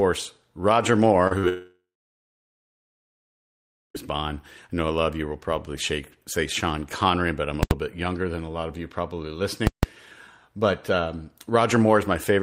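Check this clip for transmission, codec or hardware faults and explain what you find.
There are three kinds of trouble in the speech, all clustered around the early part and then two loud hits later on.

At 1.27 to 1.33 s and again at 1.39 to 1.45 s you get short concealed packet loss. Each time about 40 ms of audio didn't arrive, and the decoder papered over it by extending the last bit of sound before blending back in. It comes across as a quick smear or wobble rather than a clean gap.

Right after, from 1.49 to 3.96 s, the audio drops out for about 2.5 s. There's a brief buzzy continuation of the last sound that fades, then roughly two seconds of silence before the speech picks up again with a chunk missing. That's likely a long network dropout.

At 7.63 to 7.71 s (80 ms) and 9.67 to 9.83 s (160 ms) there are invalid numbers at full scale. Some calculation blew up into infinite or invalid values that got pinned to maximum level, so each block is heard as very loud pops or a single bang, with dead nothing between.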